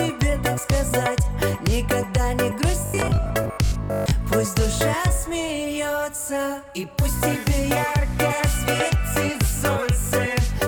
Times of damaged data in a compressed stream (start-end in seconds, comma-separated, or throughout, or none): none